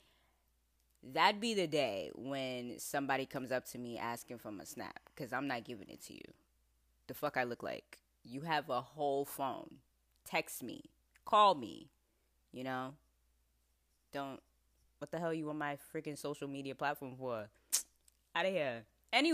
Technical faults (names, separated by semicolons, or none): timecode bleed